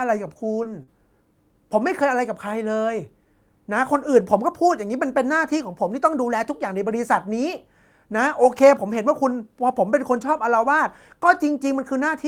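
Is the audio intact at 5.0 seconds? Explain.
Yes, at 5.0 seconds the audio is intact with no dropout, click, distortion or other audible fault.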